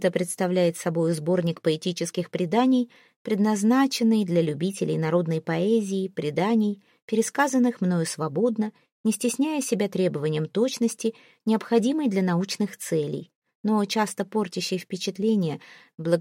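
No technical faults are audible.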